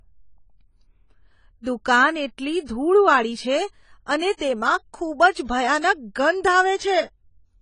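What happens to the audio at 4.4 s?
Pre-echo runs from 4.37 to 4.40 s: a short hiss rises over about 35 ms before the attack that follows and blurs its onset. The transform codec spread its quantisation noise across the whole block, so noise meant for the loud onset also filled the quiet gap ahead of it. On a waveform this shows as a thin smear of low-level noise before the sharp rise. On a spectrogram it appears as a broadband haze that starts early.

Around that moment, and throughout the speech, the sound is dull and plainly fizzy, and nothing is present above 10 kHz. This is likely AAC compression, with damage plain enough to fit a low AAC-LC bitrate near 24 kbps. A spectrogram shows a hard ceiling at 10 kHz.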